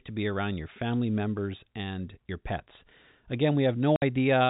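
At 3.96 s the speech drops out completely and returns at 4.02 s. This is packet loss filled with silence. Audio packets went missing in transit, and the receiver played nothing in their place. The gap lasts 60 ms, which fits two lost 30 ms packets. The sound stops and starts abruptly. The narrow telephone band of the G.711 coding stays the same on both sides of the gap.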